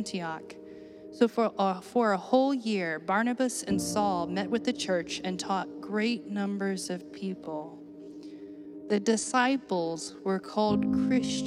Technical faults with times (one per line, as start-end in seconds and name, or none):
5.52-11.47 time-stretched section